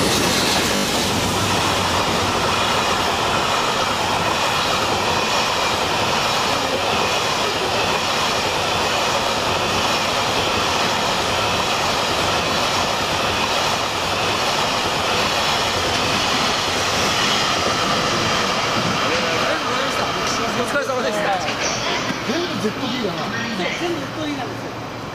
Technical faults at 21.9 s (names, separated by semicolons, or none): repeated buffer